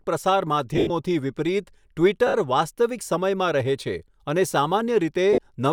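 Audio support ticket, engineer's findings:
Lost LE Audio frames, LC3 decoder concealing gaps by reusing the last spectrum with random signs. 0.74–0.90 s: scattered dropouts across 160 ms, about 120 ms missing in total, longest run around 70 ms, so the speech turns into a rough noisy smear that starts to fade. 2.27–2.34 s: a 70 ms gap with the same hiss-like fill. 5.33–5.38 s: a 50 ms gap. The gap lengths fit 10 ms frames.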